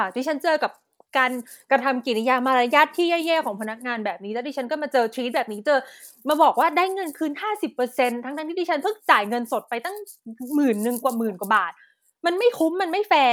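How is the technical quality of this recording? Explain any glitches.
No glitches or technical faults turn up anywhere in this speech recording.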